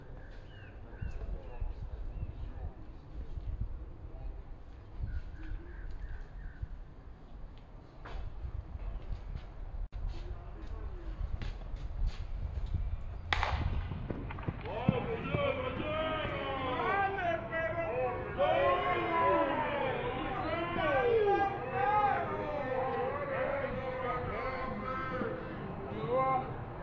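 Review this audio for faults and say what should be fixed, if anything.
Wrong sample rate throughout: the audio plays at two-thirds of its recorded rate, consistent with 24 kHz material clocked out at 16 kHz, so everything sounds slow and about 7 semitones low. Prevent it by reading the file's stated rate and resampling to the output device's rate before playback.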